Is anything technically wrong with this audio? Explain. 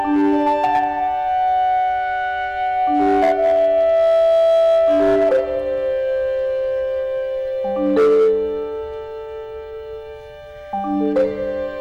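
Yes. Hard clipping occurs at 0.11–0.84 s, 2.95–5.40 s, 7.83–8.31 s and 11.03–11.24 s, overdriven by about 5, 8, 9 and 5 dB. Peaks exceed what a stage can pass and are cut flat, adding high harmonics heard as harsh crackling fuzz.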